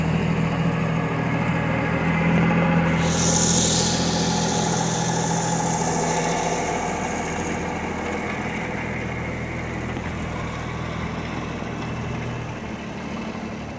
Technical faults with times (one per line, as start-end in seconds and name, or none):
none